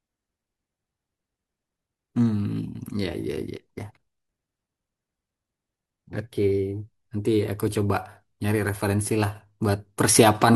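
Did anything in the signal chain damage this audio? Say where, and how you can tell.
No, nothing in the signal chain has damaged this speech recording. No stage leaves an audible mark, so there is nothing to locate or trace to a mechanism.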